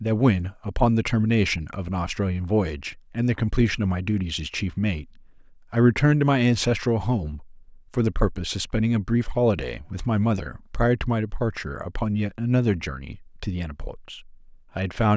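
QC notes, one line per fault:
No technical faults turn up anywhere in the signal; level, continuity and timing hold steady throughout the speech.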